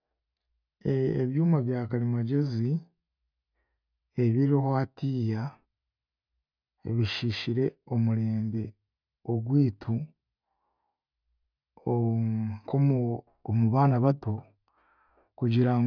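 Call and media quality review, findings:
Nothing stood out on listening to this speech recording.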